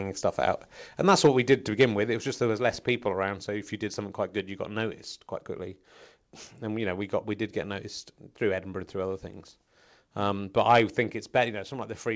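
In this speech recording, the loudest syllables between 1.07 and 1.54 s take on a harsh, crackling edge, and a second, shorter burst at 1.80 to 1.84 s sounds rougher still. This is microphone overload, likely from the input volume being set too high, so the peaks run about 4 dB and then about 5 dB past the converter's ceiling and their tops are sheared flat, a few percent of samples in the first stretch and a larger share in the second. The voice and the background drop in level abruptly at 1.27 s, by about 2 dB, and again at 11.55 s, by about 4 dB. That is the microphone volume stepped down, likely by the call software finding the microphone too loud or clipping and cutting the device's input gain in a single step rather than gradually. Through all of this the call path's band limit can be heard, with nothing above 8 kHz, which fits a wideband codec such as G.722.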